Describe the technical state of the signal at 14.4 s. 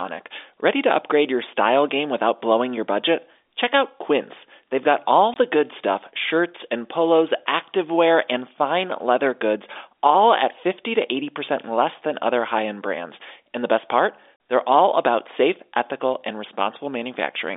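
At 14.36 s, just after "the best part", the speech drops into a brief dead hole of about 40 ms, with hard edges. This is packet loss filled with silence: audio packets never arrived, and the receiver played digital silence in their place instead of concealing the gap. A 40 ms gap fits two lost 20 ms packets. The G.711 telephone band, limited to roughly 300 Hz to 3.6 kHz, continues on either side of the hole.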